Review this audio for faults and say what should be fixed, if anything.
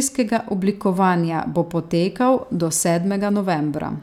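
Nothing needs fixing: the speech signal comes through intact and steady, with no faults to correct.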